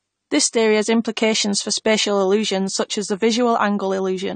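Throughout, the speech stops at 9 kHz and sounds dull, smeared and fizzy. The likely cause is AAC compression at a low bitrate.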